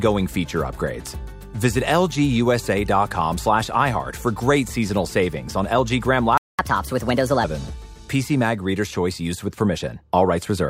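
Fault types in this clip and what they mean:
Playback stall: The player most likely ran short of buffered data or had its output thread held up, so nothing reached the output until it recovered. Here the sound cuts out abruptly at 6.38 s and stays silent for about 0.21 s, a gap long enough to register as a clear break in the flow, before audio resumes at 6.59 s without the fade or tail a natural pause would have.
Catch-up at higher speed: Having fallen behind during the stall, the player resamples its backlog to run faster than real time until it has made up the lost interval. From 6.59 s to 7.44 s the audio plays at 1.25 times normal speed, and because resampling shifts pitch along with tempo, everything sounds raised by around four semitones, giving a brief hurried stretch before snapping back to normal rate and pitch.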